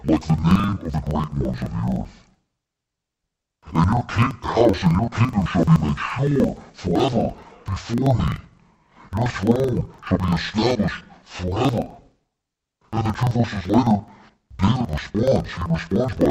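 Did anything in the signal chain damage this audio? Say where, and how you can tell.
Yes. Interleaved audio read as planar during sample-format conversion: 42.7 ms half-speed blocks make the speech an octave low and choppy, with vertical spectrogram seams at 23.4 Hz.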